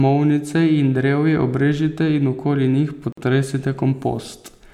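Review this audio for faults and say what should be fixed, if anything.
Gap at a join of encoded pieces, from 3.12 to 3.17 s: a silence of about 50 ms cuts into the running speech, its edges smeared by the codec, and the speech resumes exactly where it stopped. This happens when separately encoded pieces are joined without trimming: each encoder pass leaves its start-up delay of silence and the padding of its final frame in place, and those leftovers line up at the seam as a dropout. The spacing points to pieces roughly 4 s long. To prevent it, trim each piece's encoder delay and end padding before joining, or encode the whole stream in one continuous pass.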